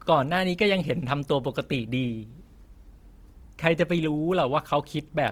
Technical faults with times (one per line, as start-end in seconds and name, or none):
0.00-5.31 Opus compression